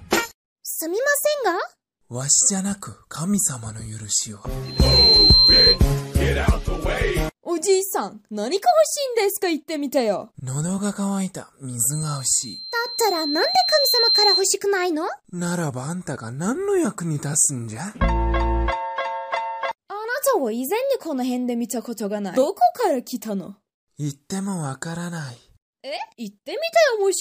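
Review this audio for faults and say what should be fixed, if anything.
Loudspeaker feedback squeal at 4.65–5.79 s and 11.92–14.50 s: a 4.1 kHz tone where loop gain exceeds one. The first rises within a third of a second to roughly 10 dB above the audio; the second swells over about two seconds. Prevent it by lowering monitor gain, repositioning the microphone, or notching 4.1 kHz.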